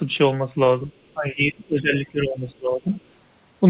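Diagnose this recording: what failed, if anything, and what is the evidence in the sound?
Call processing, speech suppressed in double talk: the speech drops by up to about 20 dB from 0.85 to 0.94 s, then again across 1.14 to 2.89 s, roughly 1.6 seconds in all. This is likely the echo canceller, unable to tell the near talker from loudspeaker echo while both sides spoke, turning everything down. On a spectrogram the speech harmonics fade and break into patches. The waveform envelope sags and pumps without following the syllable rhythm.

Call processing, other side's voice leaking through: from 2.94 to 2.98 s a short scrap of a second voice sits very faintly in the microphone signal, about 40 dB below the talker, likely where the echo canceller left residual loudspeaker pickup in place. It appears as a brief, faint harmonic trace that doesn't line up with the main speech. Like everything else in the clip, it stops at 4 kHz, the ceiling of the G.711 call path.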